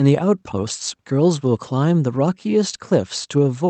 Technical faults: none

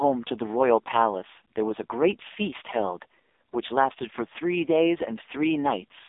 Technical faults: AMR narrowband mobile codec

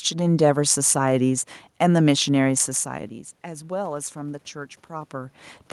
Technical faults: automatic gain rising

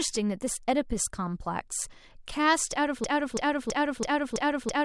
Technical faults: broken-record loop

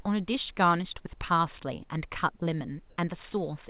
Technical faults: none

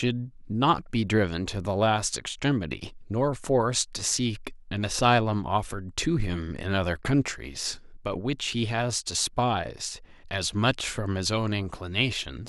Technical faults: none

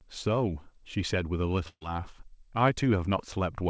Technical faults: burst of packet loss

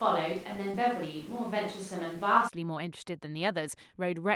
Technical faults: switch to a distant microphone; short concealed packet loss

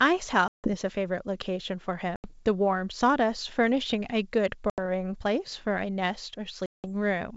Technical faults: packet loss on an ADPCM call

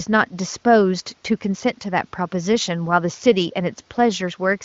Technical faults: none

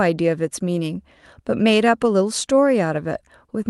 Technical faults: none

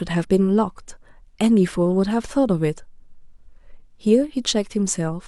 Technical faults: none

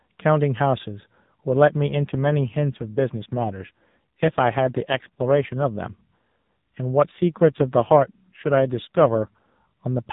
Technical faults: AMR rate drop

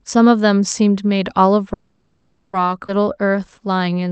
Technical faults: call audio freeze; skip ahead; jitter buffer slow-down

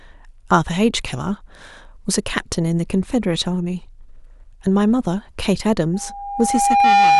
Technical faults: loudspeaker feedback squeal

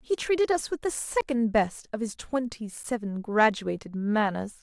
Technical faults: block of digital silence

